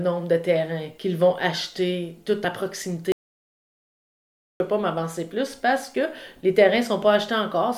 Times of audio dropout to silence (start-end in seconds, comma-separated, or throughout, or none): 3.12-4.60